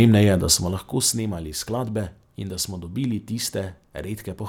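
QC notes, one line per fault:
0.43–1.20 s: zipper noise. The speech level falls by roughly 10 dB in unsmoothed steps of about 3 dB, around four per second. Each abrupt gain jump puts a small click on the waveform, heard as a ticking or zipping under the speech while the level moves.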